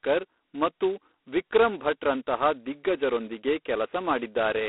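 G.726 ADPCM runs throughout the speech, coding each sample as a tiny difference from a predicted value. The coarse steps, which fit 16 kbit/s, leave a harsh, rasping hiss riding on the speech's level, within a thin 250 Hz to 3.4 kHz telephone band, with nothing above 3.8 kHz.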